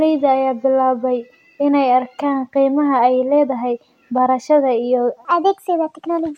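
From 5.25 s to the end, after "leedahay barashada iyo", a section at the wrong speed runs 1.33 times fast, about five semitones higher, likely from playback on a mismatched clock. Speed and pitch shift together, unlike a pitch-only error.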